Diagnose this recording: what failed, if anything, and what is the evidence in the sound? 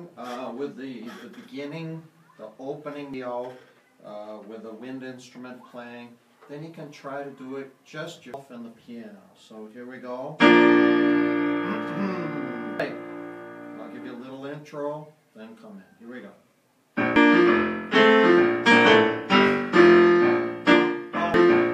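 Damaged data in a compressed stream, at 3.14, 8.34, 12.80, 17.16 and 21.34 s, a failure at the codec stage. Each time a brief chirp or blip cuts through the sound, roughly every four to five seconds. Corrupted bytes in the compressed file make the decoder misread or reject the affected frames. It loses synchronisation and briefly outputs garbage until it finds the next valid frame header and resumes clean decoding.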